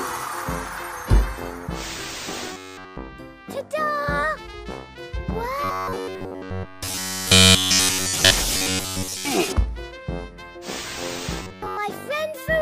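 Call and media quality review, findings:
Robotic sound from repeated short buffers at 2.53–2.97 s, 5.64–8.32 s, 8.57–9.25 s and 11.42–11.77 s. Rigid metallic buzz at 93.8 Hz, a 10.7 ms repeat. Fully repeated in the first two, mostly in the last two. Likely cause: playout buffer underrun.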